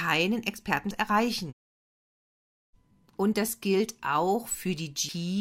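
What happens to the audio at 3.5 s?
Nothing goes wrong at 3.5 s; the speech carries on intact through that moment with no dropout, click or distortion.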